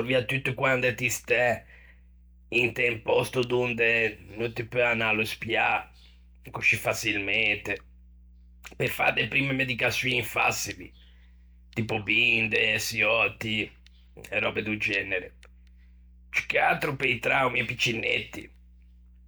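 Mains hum at 60 Hz runs under the speech throughout, about 25 dB down: a steady low drone from power-line coupling, drawn as a flat, unbroken line near the bottom of a spectrogram.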